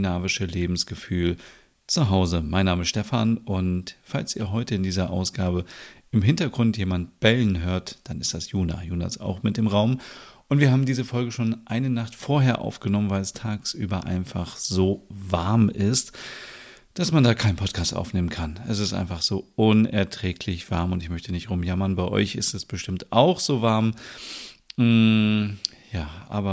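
A speech recording with nothing technically wrong with it.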